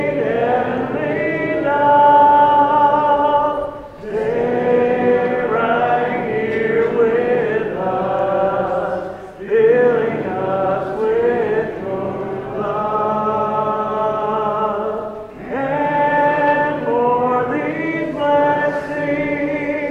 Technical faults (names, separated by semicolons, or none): none